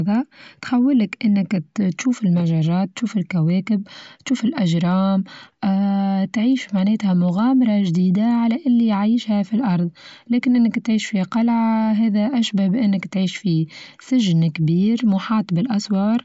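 No technical faults are audible.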